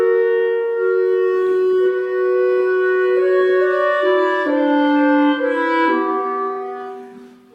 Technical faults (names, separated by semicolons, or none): none